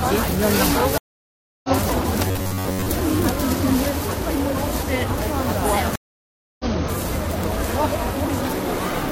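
Stream reconnect at 0.98 to 1.70 s and again at 5.96 to 6.66 s breaks up this recording of everyday sound. Each time the connection drops, the player goes silent for about 0.66 s and then 0.64 s, and a fresh decoder picks the stream up further along. The sound resumes roughly 0.4 s later in the first case and about 0.7 s later in the second, so a stretch of audio is simply missing rather than delayed. Robotic sound from repeated short buffers appears at 2.28 to 2.92 s. The audio turns into a rigid, metallic buzz at 93.8 Hz while still loosely tracking the underlying sound. The likely cause is new data arriving too seldom, with the software filling the gaps by looping the last chunk of about 10.7 ms over and over. That period sets the fixed buzz pitch, and most of the real audio in that span is skipped.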